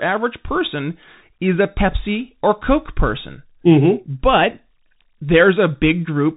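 Bluetooth CVSD headset codec damage runs throughout: the spectrogram stops dead at 3.8 kHz, one-bit delta steps leave s sounds scratchy, and granular hiss speckles underneath.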